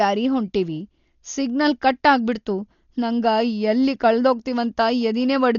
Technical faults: Dolby Digital compression

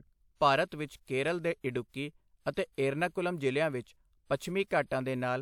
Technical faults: pre-echo

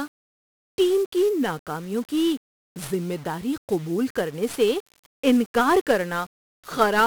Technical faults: 1-bit DFPWM compression

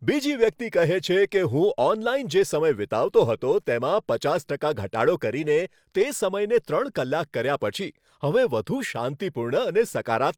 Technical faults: none

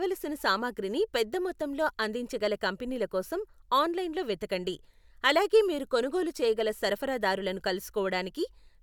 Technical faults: none

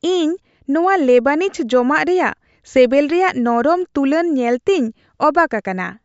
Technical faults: none

